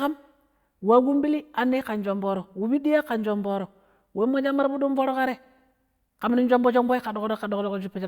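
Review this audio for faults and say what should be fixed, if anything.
No faults turn up in this audio, so nothing needs to be fixed.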